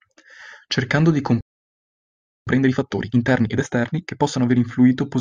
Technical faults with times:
1.41-2.47 playback stall
2.47-4.57 time-compressed catch-up

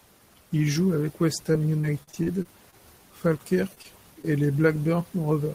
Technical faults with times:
1.52-2.74 repeated packet loss (robotic sound)
3.75-3.86 short concealed packet loss
4.22-4.25 short concealed packet loss

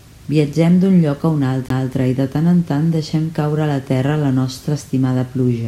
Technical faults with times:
1.68 CD skip

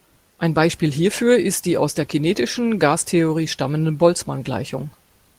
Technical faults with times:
none

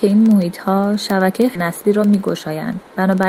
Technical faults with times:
0.10-3.28 word clock ticks
1.55 skip ahead
1.65-2.84 jitter buffer speed-up

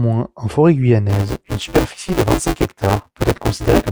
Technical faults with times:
1.09-3.91 buffer tearing

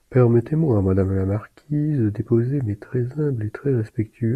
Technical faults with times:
none

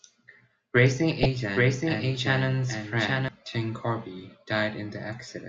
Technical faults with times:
0.86-3.28 doubled audio track
1.16-1.26 DAB burbling

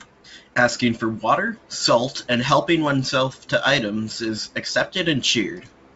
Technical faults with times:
none

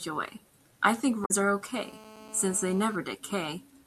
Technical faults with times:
1.22-1.31 damaged data in a compressed stream
1.74-2.96 GSM phone buzz

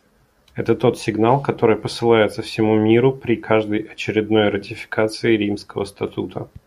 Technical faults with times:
none

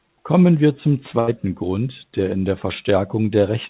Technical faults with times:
1.20-1.29 burst of packet loss

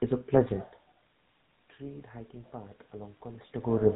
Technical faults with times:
0.00-3.95 GSM full-rate codec
1.77-3.95 automatic gain rising

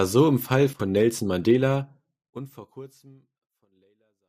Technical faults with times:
none

